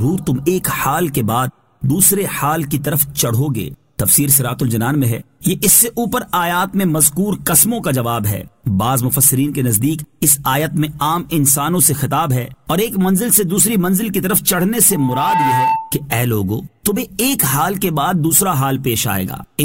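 From 14.91 to 16.06 s, loudspeaker feedback squeal: the mic loops its own speaker and an 890 Hz tone swells up, as loud as the audio.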